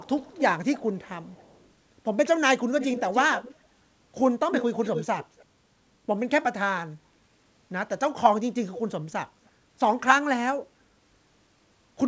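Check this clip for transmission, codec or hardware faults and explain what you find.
One fault recurs: an echo leak, heard in five places in this speech clip. The band stops at 8 kHz, which fits a wideband call codec and is not itself a fault.

Echo leak at 0.04–0.42, 0.72–1.71, 2.78–3.56, 4.82–5.45 and 9.45–9.49 s: a delayed copy of the speech, trailing by about 270 to 300 ms. It is loudest near 2.8 and 4.8 s, where it is roughly 10 dB down, and is barely audible at 9.45 s. The likely cause is a far-end loudspeaker whose echo canceller let residue through. On a spectrogram it shows as ghost harmonics offset about 0.3 s to the right. On the waveform it shows as low-level smearing after each burst.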